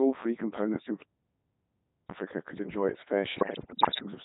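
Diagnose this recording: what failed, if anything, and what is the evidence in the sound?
Codec stage: the speech throughout is heavily buzzy and robotic, rebuilt from sine waves rather than the original waveform. This fits a Codec 2 vocoder at its 3.2 kbit/s top rate.

Network stage: bit errors on digital voice radio begin just after "could enjoy its" and run from 3.38 to 4.06 s. Flipped bits, around 7 percent, corrupt frame pitch, level and spectrum, producing warbling, jumping gibberish.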